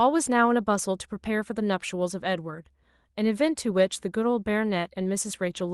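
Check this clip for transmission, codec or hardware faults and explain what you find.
Nothing stood out on listening to this speech recording, which came through an Opus call connection.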